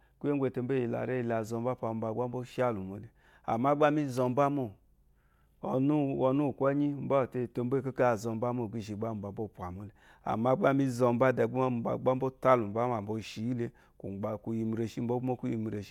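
No audible technical faults.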